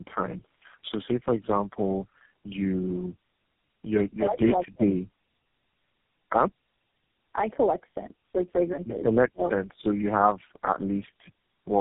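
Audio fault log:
throughout: tandem speech coding, three speech codecs in series (G.729A, AMR-NB 5.15 kbit/s, GSM full rate) compounding rough, muffled warble. The spectrogram is blank above 3.8 kHz, with smeared harmonics.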